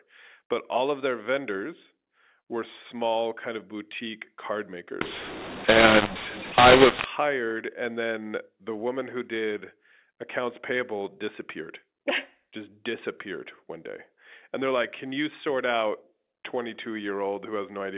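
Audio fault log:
5.01 to 7.04 s, mu-law and A-law mixed up: just after "kind of boutique card", mu-law telephone speech gets decoded as A-law, so levels scramble, it turns harsh and the pauses fill with hiss.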